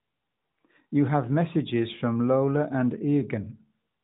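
Nothing to flag here; the speech simply has the narrow, phone-call quality you'd expect from the AMR narrowband mobile codec, with nothing getting through above 4 kHz.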